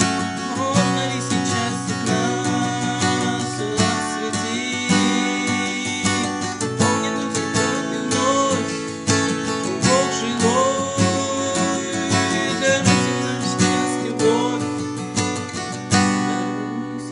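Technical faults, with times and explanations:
No technical faults are audible anywhere in the audio.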